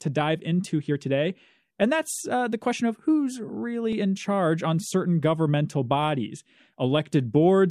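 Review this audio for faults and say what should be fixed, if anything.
There's a quick skip at about 3.93 s in this speech, from an overlap between stream segments. Two 4-second segments claimed the same moment, so the player trimmed roughly 18 ms of real audio, and the waveform jumps across the gap. To prevent it, stamp segment boundaries so each one starts exactly where the previous one ends.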